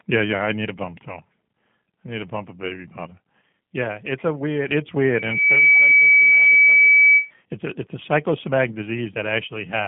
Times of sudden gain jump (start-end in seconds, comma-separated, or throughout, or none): 3.41-4.68